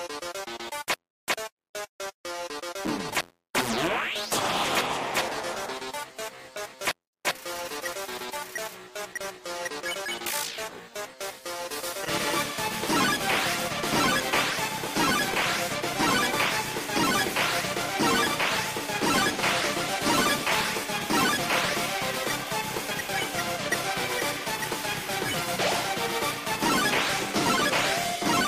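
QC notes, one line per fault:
Throughout, filter restarted on every block: a steady buzz near 86.1 Hz that tracks the level, from a small transient at each block start, which fits 512-sample blocks.
16.49 and 22.90, compressed frames skipped: the audio jumps ahead about 70 ms, then about 50 ms, as whole 23.2 ms frames go unplayed.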